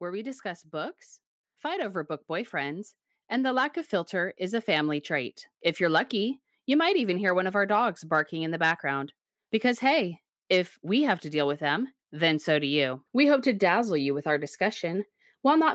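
From 0.05 s to 5.9 s there is automatic gain rising. The gain control judged the input too quiet and kept turning it up, by about 11 dB. Speech and background swell together. The level settles just before "lucky you might even".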